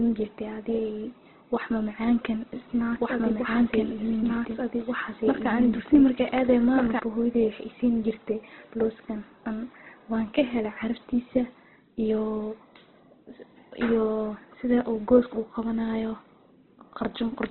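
From the start the speech is band-limited, with nothing above about 4.2 kHz, and it sounds rough and grainy with noisy fill where detail should be. That points to heavy Opus compression, likely a narrowband encode at a low rate around 12 kbps.

From 2.53 s to 6.99 s there's a doubled audio track: a second full-band copy trails roughly a second and a half behind, about as loud as the original and with no room colour. It cuts in and out abruptly, likely from a second capture path or an out-of-step edit.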